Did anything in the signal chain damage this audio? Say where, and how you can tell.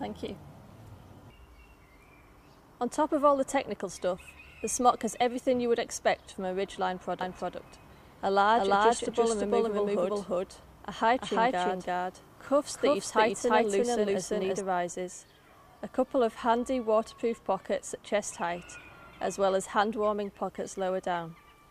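Yes. A doubled audio track runs from 7.21 to 14.61 s. An equally loud, dry copy trails by about 300 ms, likely from a second, slower capture path.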